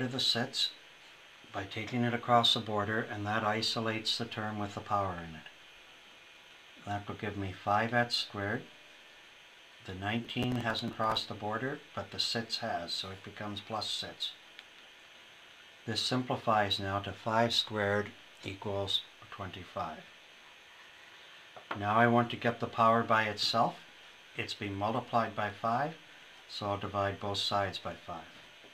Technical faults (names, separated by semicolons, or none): processor overload crackle